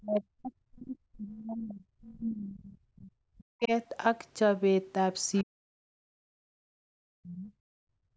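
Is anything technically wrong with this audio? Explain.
Yes. Three related echo-canceller faults are audible.

From 0 to 3.15 s, 3.32 to 3.72 s and 5.43 to 7.53 s, the talker's speech is suppressed in double talk. The voice sinks by roughly 40 dB and breaks up. The likely cause is the canceller mistaking overlapping talk for loudspeaker echo and attenuating everything.

From 5.33 to 5.44 s, the other side's voice leaks through. A brief, faint scrap of a second voice sits around 25 dB below the talker. The likely cause is residual loudspeaker echo that the canceller failed to subtract from the microphone.

From 7.81 s to the end, the background is gated by the echo canceller. The room sound drops by about 38 dB for roughly 0.4 s. The canceller clamped the microphone hard while the loudspeaker was active, so the ambience vanishes.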